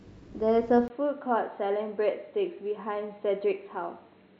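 At 0.88 s a 20 ms gap opens, then the speech turns dull and boxy to the end, with nothing above 4.2 kHz, a slightly lower level and faint new background noise. This is likely an input switched to a poorer device. The gap and changed noise floor set it apart from a simple filter.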